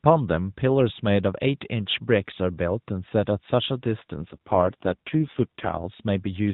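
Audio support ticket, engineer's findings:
AMR rate drop, 4.22–5.82 s: speech turns rougher, buzzier and more synthetic, then recovers. Bandwidth unchanged; no dropout or gap. Fits the AMR-NB link stepping down from 12.2 kbps to around 5.9 kbps, with fewer pulses per subframe to shape the speech, and back up. Distinct from packet loss (no silence or concealment repeats) and codec/bandwidth switch (same 4 kHz ceiling). Light narrowband coding outside the window.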